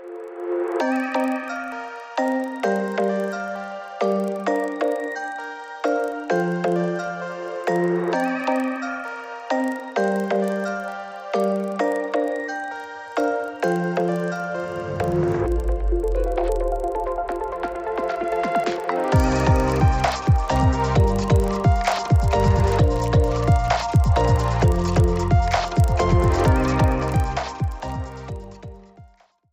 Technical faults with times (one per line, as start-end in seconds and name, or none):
0.00-29.52 resampler restarted on every block